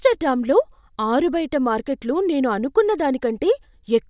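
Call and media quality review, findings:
No audible faults found in the speech recording.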